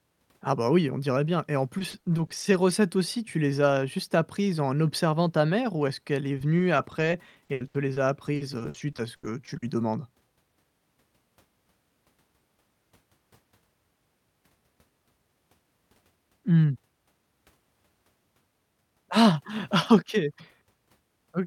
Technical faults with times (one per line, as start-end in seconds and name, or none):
1.74-2.71 repeated packet loss (robotic sound)
6.38-9.63 repeated packet loss (robotic sound)